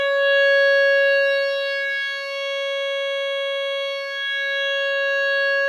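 Music clip, no faults heard.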